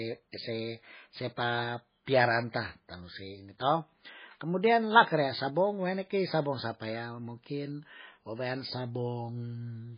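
Speech throughout with heavy MP3 compression damage: nothing above 5 kHz, watery swirling artefacts and smeared attacks, likely from MP3 encoding at a very low bitrate, which fits roughly 16 kbps.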